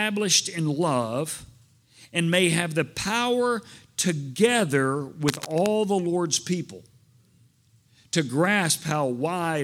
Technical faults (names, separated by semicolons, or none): cable scratch noise